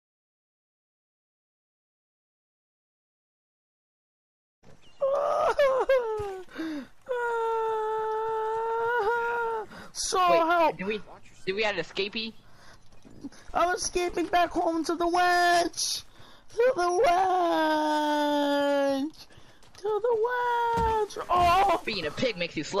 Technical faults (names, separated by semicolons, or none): none